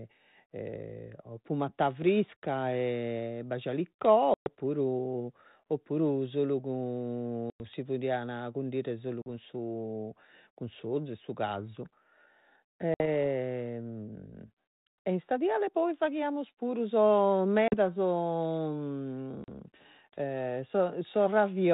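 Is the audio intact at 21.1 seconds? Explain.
Yes, the speech at 21.1 seconds is intact, with no fault at that moment.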